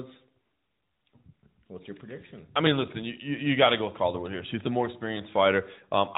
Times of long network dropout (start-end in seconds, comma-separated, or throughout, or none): none